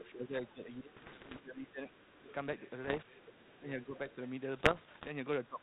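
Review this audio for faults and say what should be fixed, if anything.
A faint second voice sits under the speech from 0.00 to 0.13 s, 0.46 to 0.52 s, 1.92 to 2.33 s and 3.23 to 4.15 s. It is about 20 dB below the talker, and about 30 dB below in the short 0.46 s scrap. This is the other side's voice leaking through. The far end's audio, played on the talker's loudspeaker, was likely picked up again by the microphone, and the echo canceller left a residue instead of removing it. Better acoustic isolation between loudspeaker and microphone, or a properly converged echo canceller with residual echo suppression, would prevent it.

The talker's level sags and thins from 0.13 to 1.92 s, with around one and a half seconds of that stretch pulled down by as much as about 15 dB. Shorter dips follow at 3.6 to 4.0 s, of about 10 dB, and at 5.48 to 5.63 s, of about 15 dB. Both sides talk at the same moments here. 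This is speech suppressed in double talk: likely unable to tell the talker from the loudspeaker echo, the echo canceller attenuated everything together. A canceller with reliable double-talk detection, one that stops adapting and suppressing while the near end is speaking, would keep the talker's voice intact.

Pops and short rough, crackling bursts with sudden level jumps appear from 0.96 to 1.40 s, 2.84 to 3.03 s and 4.57 to 5.11 s. These are bit errors on an ADPCM link, with an error rate around one or two percent. Because the decoder adapts its step size and prediction from the corrupted bits, each error rings on briefly rather than staying a single click. The banded sound fits G.726 at 32 kbit/s, as used on DECT cordless phones. Improving the radio link or adding error protection on that hop would prevent it.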